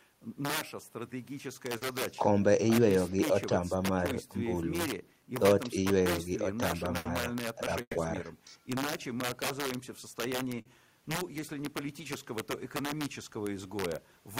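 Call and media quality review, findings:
Integer overflow, throughout: gain stage pushed about 6 dB past full scale wraps instead of saturating, so around one percent of samples flip to the opposite extreme. Loud speech peaks become harsh, violent cracks, far sharper than ordinary clipping.

Short concealed packet loss at 1.77–1.83 s and 10.61–10.67 s: roughly 40 ms of audio missing at the jitter buffer or decoder each time, bridged by concealment extrapolating the preceding sound. A brief smear or wobble, with a consonant possibly lost.

Burst of packet loss at 6.97–7.07 s and 7.81–7.97 s: consecutive packets lost or late, about 80 ms and then 140 ms of speech never played. Concealment holds the last sound as a buzz or hiss, fading to silence for the final 50 ms of the second gap. Speech then resumes with the intervening part gone.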